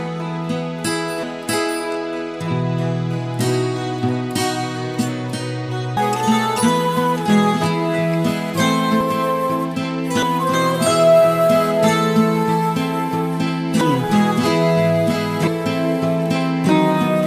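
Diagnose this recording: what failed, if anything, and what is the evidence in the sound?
Compressed frames skipped, at the codec or storage stage: the audio jumps forward at 1.23, 5.97, 9.01, 10.22, 13.81 and 15.47 s, losing roughly a third of a second to seven-tenths of a second each time. Those lengths fit whole 32 ms frames going missing or being rejected as damaged. On a waveform each join is a sudden discontinuity in the envelope. On a spectrogram, the content changes abruptly, with a narrow vertical stripe at the splice.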